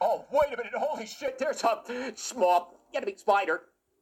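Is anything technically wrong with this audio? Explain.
Yes. From the start to 1.28 s there is channel delay (comb filtering): one channel runs roughly 1.5 ms late, and when the two are summed to mono their shared content cancels at evenly spaced frequencies, the lowest near 400 Hz, leaving the sound hollow and phasey.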